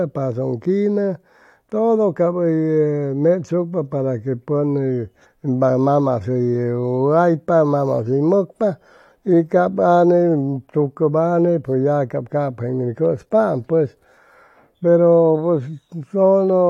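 Nothing in the recording stood out as a technical problem on listening.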